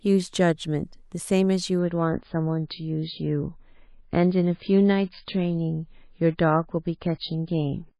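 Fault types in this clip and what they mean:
adaptive stream at a lower bitrate: at 1.79 s the audio switches abruptly, with no gap, to a lower-quality stream, consistent with MP3 dropping from 128 to 17.6 kbit/s. A spectrogram shows everything above 5 kHz cut flat to the end, with blocky artefacts. The waveform stays continuous.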